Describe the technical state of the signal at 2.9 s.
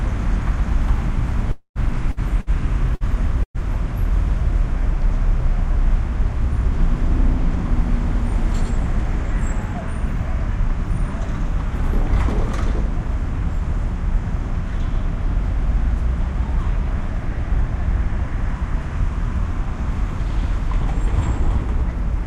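At 2.9 s the audio sits inside a stretch of repeated packet loss (robotic sound), 2.11 to 3.64 s. Five gaps, the longest 111 ms, are patched by stretching the preceding sound, giving choppy sound with pieces missing rather than one clean dropout or silence.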